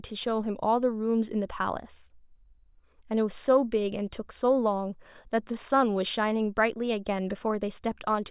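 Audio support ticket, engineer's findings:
Engineer's findings: no fault found in the speech audio for this support ticket.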